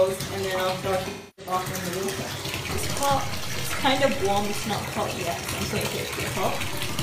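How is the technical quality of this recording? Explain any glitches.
The recording has two audible faults: a concealed packet loss early on and a baseline shift near the end.

From 1.06 to 1.52 s there is AAC frame loss with concealment. The decoder lacked roughly 0.3 s of data, which fits about seven lost frames, and rebuilt the gap from the last good spectrum. The result is a smeared, noisy, phasey patch rather than true silence, which distinguishes it from a plain dropout.

At 6.38 s a DC step occurs. The waveform's zero line jumps to a new offset and stays there to the end of the clip, producing a single low thump while the sound itself continues unchanged. Because the offset holds rather than returning to zero, it is a DC step and not an isolated click.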